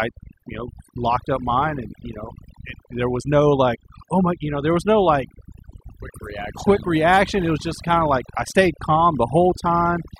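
Speech, with overdone noise removal running through the whole clip. A noise reduction process has been set far too aggressively, so any frequency band whose level sits close to its noise estimate is pulled down hard or gated off entirely. Between phrases the background collapses to near silence dotted with twinkling, metallic specks. The quieter components of the voice are caught in the same cuts.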